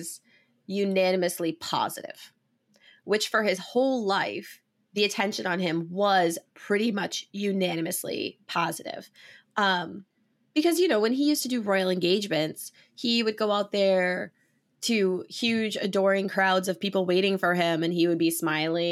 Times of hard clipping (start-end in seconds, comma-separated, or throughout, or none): none